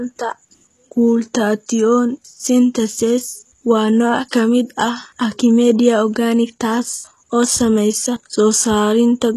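Throughout the speech, the treble sounds synthetic rather than captured, with s sounds gritty and lispy and nothing above about 12.3 kHz. This points to HE-AAC compression at a low bitrate, likely around 16 kbps, where spectral band replication rebuilds the upper band from copied lower harmonics.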